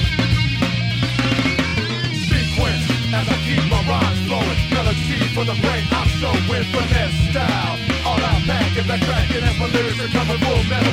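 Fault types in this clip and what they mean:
repeated frames: the same short slice of compressed audio plays again, adding time rather than losing it, unlike a dropout. At 1.67 s a 23.2 ms block, likely one frame, sounds three times in a row; at 5.02 s a 69.7 ms block repeats once.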